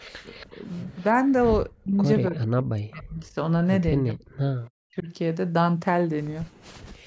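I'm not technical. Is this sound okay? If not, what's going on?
No, there are a few problems, all of the kind you get on a speakerphone call.

First, an echo leak. From the very start to about 1.32 s, a faint repeat of the talking trails the original by roughly a quarter of a second (about 0.28 s). It comes back as quieter scraps at 4.64–4.70 s and 6.44–6.49 s. The likely cause is a loudspeaker at the other end whose echo canceller didn't catch everything its microphone heard, so part of it bounced back down the line.

Second, speech suppressed in double talk. In three stretches the voice suddenly sinks or drops out in pieces: briefly between 0.1 and 0.55 s, for about a second in total between 1.81 and 3.36 s, and for a shorter total between 4.0 and 5.08 s. The dips are deep. This likely happened because both sides were talking at once, and the echo canceller couldn't tell the talker from the loudspeaker, so it turned everything down.

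Third, background gated by the echo canceller. From about 6.53 s to the end, the room sound behind the voice drops away sharply for around half a second. The echo canceller clamped the microphone down hard while the loudspeaker was playing, so the ambience vanishes until it lets go.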